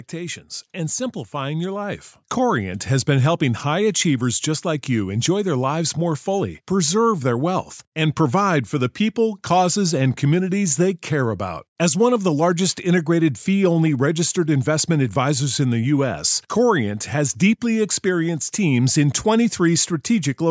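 From 0.1 to 2.89 s there is an automatic gain rising fault. The gain control judged the input too quiet and pushed its gain up by about 10 dB. Voice and background swell together. The level settles just before "been helping high achievers".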